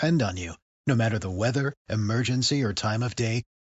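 No audible technical faults turn up anywhere in this recording.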